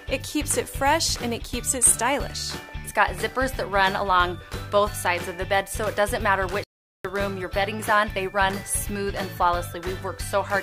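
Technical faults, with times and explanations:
6.64–7.05 s, playback stall: the sound drops to silence for 409 ms mid-flow, then resumes, likely because the player's buffer ran dry or its thread blocked.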